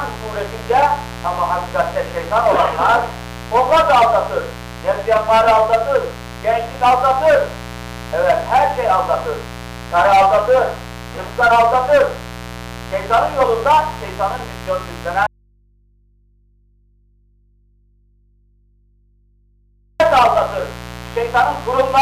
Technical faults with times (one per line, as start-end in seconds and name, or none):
0.00-22.01 mains buzz
15.27-20.00 audio dropout to a faint residue